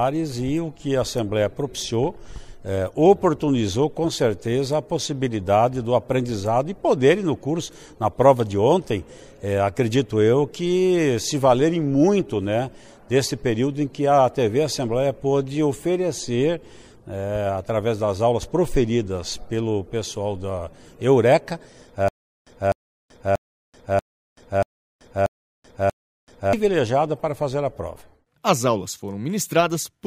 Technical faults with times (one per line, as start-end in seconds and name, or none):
22.08-26.53 stutter with silent gaps